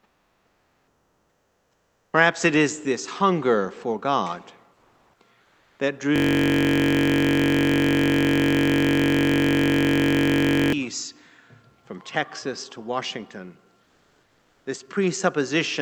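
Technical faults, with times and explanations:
0.00–2.13 s, 4.73–5.19 s and 5.41–5.79 s: comfort noise in place of the background. In these quiet stretches the real background, about 40 to 43 dB below the loudest parts, gives way to a flat, featureless hiss. The first stretch drops by about 9 dB. The later two shift by only about 2 dB and 1 dB. The likely cause is Opus discontinuous transmission. The sender stopped sending when its detector judged the input silent. The receiver then filled the gap with synthetic noise of a similar rough shape.
6.16–10.73 s: system hang loop. A single 21.33 ms slice of audio repeats exactly, about 214 times in a row. At 46.9 repeats per second, the loop is heard as a steady, low buzz near 47 Hz, not as a stutter. The system froze while the sound hardware kept cycling through the same ring buffer, replaying its contents. The loop length fits a 1024-sample buffer. 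The audio resumes once the system recovers.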